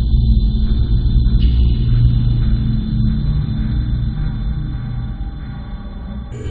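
From 0.21 s to 6.21 s there are periodic USB or driver dropouts: every 0.5 s a tiny sliver of audio gets skipped, heard as steady little ticks.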